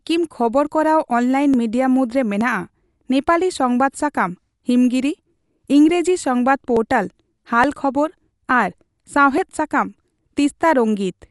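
Speech, and it sounds dull and gritty throughout, with nothing above about 11.4 kHz and a rough, fluttery noise clinging to the voiced parts. That's most likely Dolby Digital compression starved for bits, which fits an encode at around 64 kbps, where lots of frequency lines get filled with dither noise instead of real detail. On top of that, there's a regular click every 0.87 s from 0.67 s to 11.12 s, about fifteen of them, sounding like clock drift buffer slips. Two devices running on separate clocks, off from each other by several hundred parts per million, would drop or repeat a small chunk of a few dozen samples each time the buffer runs out of slack.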